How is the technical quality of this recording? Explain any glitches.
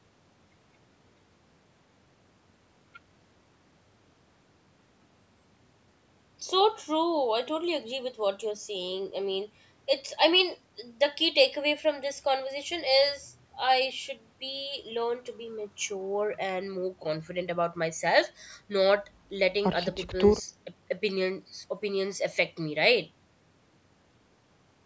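No glitches; the recording's technical quality holds up well.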